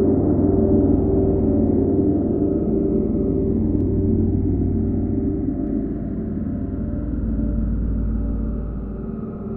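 From 3.81 to 5.67 s, channel delay (comb filtering): one channel lags by roughly 0.1 ms, so summing cancels near 5 kHz, leaving a dull, hollow sound and evenly spaced dark notches on a spectrogram.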